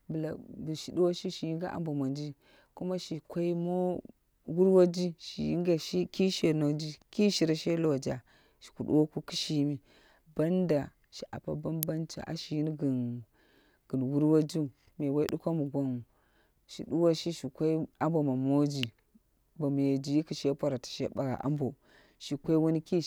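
Sharp snaps land at 11.83 s, 15.29 s and 18.83 s over the speech, each an electrical switching spike, likely a nearby switch arcing into the line. On the waveform each is a lone needle peaking near -10 to -15 dBFS; the spectrogram shows a thin full-height vertical stripe.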